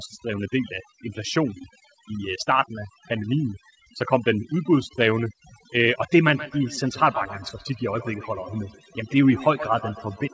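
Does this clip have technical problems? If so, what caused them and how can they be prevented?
Yes, two problems.

The whole clip has overdone noise removal. The suppressor is chopping individual frequency bands right down whenever they sit near its noise estimate, so the background drops and breaks up into little twinkly specks, and the quieter parts of the speech vanish too. To prevent it, turn the noise reduction strength down or record somewhere quieter so it has less to do.

From 6.24 s to the end there's feedback echo between two devices. One device is playing back what the other's mic sent, and that mic catches it again. Each echo canceller only removes its own device's playback, so the sound keeps coming round roughly every 150 ms, peaking at about 14 dB below the speech and getting thinner and more ringy. To prevent it, keep only one device joined with audio in the room, or mute the speaker on the second one.

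The top end stops at 8 kHz, which is just the call path's bandwidth and not a fault.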